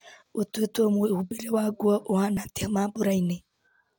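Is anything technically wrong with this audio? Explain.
Yes. At 2.37 s there's an overlap between stream segments: overlapping timestamps on these 2-second chunks make the player trim real speech, so the waveform jumps with a tiny skip.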